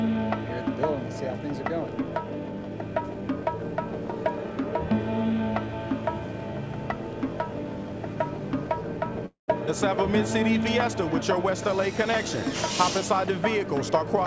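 From 9.26 to 9.50 s the sound turns into a fading buzz, then silence, a likely long network dropout: a decaying smear on the spectrogram, a flat waveform gap, with content nothing above 8 kHz on the G.722 call path.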